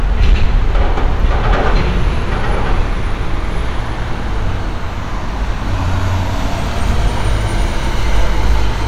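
Right near the start, from about 0.23 to 1.06 s, there's hard clipping. The sound is being pushed roughly 3 dB past what some stage in the chain can handle, so the peaks get sliced off flat instead of rounding over. Those squared-off tops throw extra harmonics high up the spectrum, and with only a modest overload like this you hear it as a gritty crackle riding on the loudest moments rather than a constant fuzz.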